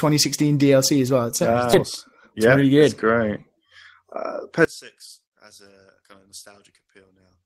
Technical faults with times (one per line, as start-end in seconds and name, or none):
1.73-1.75 skip ahead
1.83-3.01 jitter buffer speed-up
4.65-7.46 one channel inverted